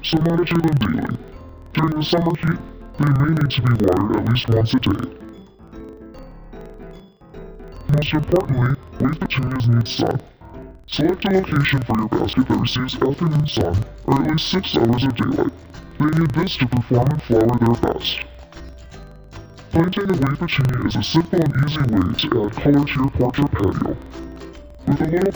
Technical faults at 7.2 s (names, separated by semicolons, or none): interleaved audio read as planar